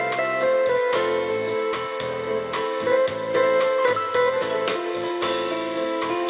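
Nothing in the recording stood out as a technical problem on listening.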